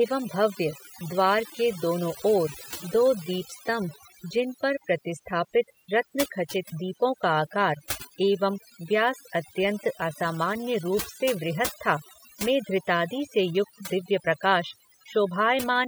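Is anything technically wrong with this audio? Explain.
Yes. Throughout the speech there is overdone noise removal. A noise reducer pushed too hard keeps shutting off individual frequency bands whenever their level sits close to its noise estimate, and the softer parts of the voice get caught along with the noise. The background drops and breaks up into twinkling specks. Unlike a noise gate, which mutes everything at once, the cuts land band by band, so the specks remain even in the pauses.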